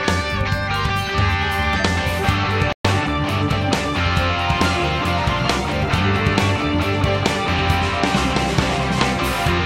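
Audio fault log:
2.73 to 2.85 s, playback stall: the sound just cuts out mid-flow for about 120 ms and then comes back. A dead gap like that most likely means the player ran dry of data or its thread got blocked, so nothing reached the output until it recovered.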